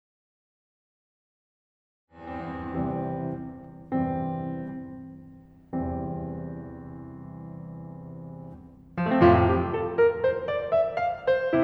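Nothing stood out on listening to this music, where the gentle fade-in from around 2 s rises smoothly to full level by 3.05 s.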